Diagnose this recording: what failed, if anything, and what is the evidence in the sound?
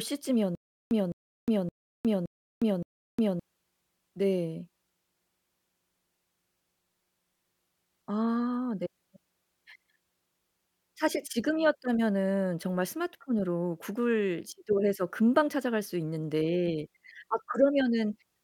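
From 0.55 to 3.40 s, a stutter with silent gaps: a 210 ms speech fragment repeats five times, separated by 359 ms of silence, likely a stalled playback buffer re-serving its last block.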